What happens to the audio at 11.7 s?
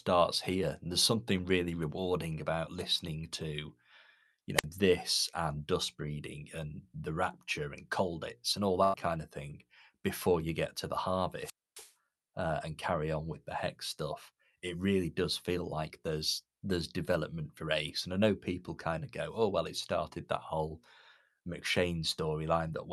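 The wireless microphone's radio signal faded until the receiver's squelch cut in, a squelch dropout from 11.33 to 11.94 s: hiss rises after "you get to the", then about 0.27 s of near silence before "uh and carry on" returns.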